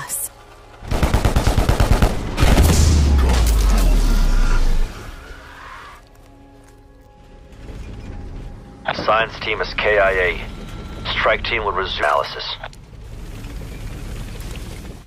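No audible technical faults anywhere in the recording.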